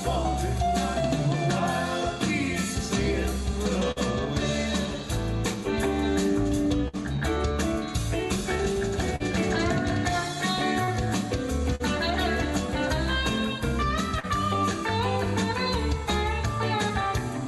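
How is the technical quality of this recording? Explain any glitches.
The recording has two bursts of packet loss and four short concealed packet losses. The audio also carries the coding noise of a call codec, with nothing above about 12 kHz, which points to Opus at a moderate bitrate.

The bursts of packet loss fall at 3.91 to 3.99 s and 6.88 to 6.96 s. Packets were lost or arrived too late to play. The receiver extended the last sound for about 50 ms and faded it, giving a brief held buzz or fading hiss. Then about 40 ms of audio is simply gone, and the sound jumps ahead.

The short concealed packet losses occur at 9.16 to 9.23 s, 10.84 to 10.90 s, 11.75 to 11.83 s and 14.20 to 14.26 s. Each time, a small piece of audio missed the decoder. The receiver covered about 35 to 45 ms by continuing the preceding sound, then blended back in. Each one is heard as a quick smear or wobble, and a short sound can drop out.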